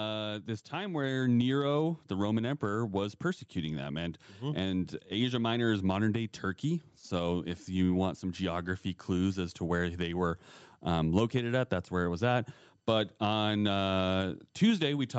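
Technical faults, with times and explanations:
0.70–1.37 s, automatic gain rising: The gain control judged the input too quiet and lifted it about 3 dB. Speech and background swell together.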